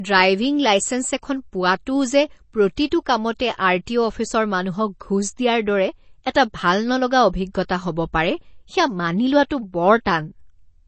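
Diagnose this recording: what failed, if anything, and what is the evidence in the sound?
Codec stage: the speech has a watery, swirling quality throughout, with smeared onsets, most likely from MP3 compression at a bitrate near 32 kbps. A spectrogram shows nothing above 8.3 kHz and flickering gaps below, as weak frequency lines drop out frame to frame.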